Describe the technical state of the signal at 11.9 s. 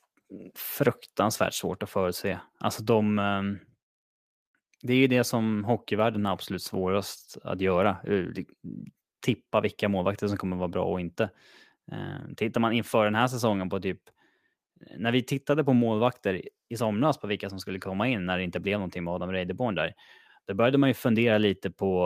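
Nothing is wrong with the signal at 11.9 s; the speech passes through intact at that moment, with no dropout, click, distortion or other fault to be heard there.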